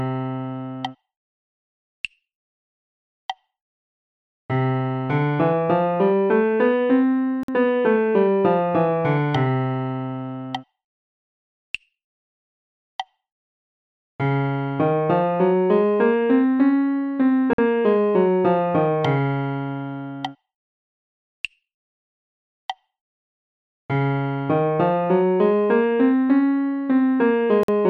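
At 7.43 s, 17.53 s and 27.63 s the sound drops out for 50 ms at a time, a gap between chunks: silence inserted at segment joins with nothing lost. Each is a hard-edged hole, a flat waveform stretch and a blank vertical band on a spectrogram.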